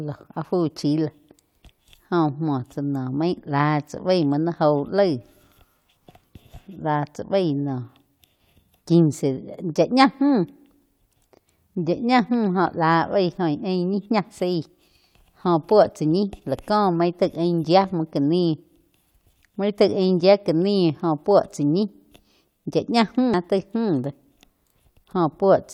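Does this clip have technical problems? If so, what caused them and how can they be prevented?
Yes. At 23.34 s there is damaged data in a compressed stream. A stretch of the encoded bitstream is corrupt at that point, so the decoder cannot interpret the affected frames correctly. It loses its place in the stream and has to hunt for the next valid frame header before decoding can resume. The result is a brief, abrupt glitch in the speech, a momentary break where the decoded audio is wrong. To prevent it, transfer and store compressed files over checksummed, error-checked channels, and keep metadata injection separate from the audio frames.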